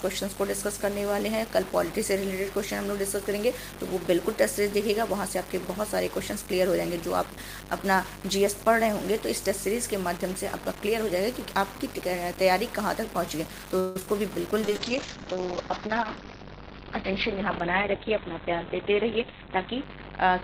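The audio carries coarse, grainy distortion throughout that rises and falls with the signal, sitting about 15 dB below it. This points to low bit depth without dither, likely 5-bit truncation, and unlike added hiss the grit disappears when the sound does. From 13.79 to 13.97 s a call audio freeze fills roughly 161 ms with a fading continuation of the last sound, likely from a drained jitter buffer. Playback then resumes where it stopped, so nothing is lost and only a gap is inserted. Right after, short concealed packet loss smears 14.00–14.02 s and 14.06–14.08 s. These differ from the freeze because real audio is actually missing, about 30 ms and 10 ms respectively. From 14.64 s to the end a call bitrate drop, from 32 to 9 kbps, turns the sound rough and muffled as the bandwidth falls from 20 kHz to 4 kHz. This is a loss of top end and detail rather than the signal-following grit of the bit depth. 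Finally, a jitter buffer speed-up from 15.87 to 20.33 s plays the audio about 3% fast, trimming about 150 ms, with the pitch unchanged, which distinguishes it from a simple resampling error.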